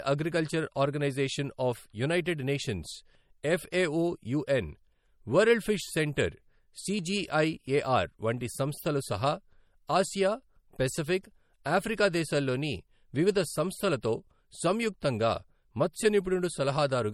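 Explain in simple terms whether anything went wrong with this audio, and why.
Two faults can be heard. Throughout the speech there is a watery, swirly quality, with s sounds turning metallic and sharp edges blurring, the signature of MP3 compression, here likely from a low-quality encode. The encoder saves space by dropping detail it judges unimportant, so faint parts of the sound flicker in and out from moment to moment. It also removes the very top of the treble, leaving nothing above about 18.9 kHz.

At 11.64 s, just before "ఆఫ్రికా దేశాల్లోని వివిధ సంస్థలతో", a hiss arrives about 18 ms ahead of a sharp attack, making it sound softened. This is pre-echo. The codec handles sound in short chunks and spreads its added noise evenly across each one. When a sudden loud onset falls late in a chunk, noise meant to be hidden by the loud part leaks into the quiet moment just before it, where the ear notices it.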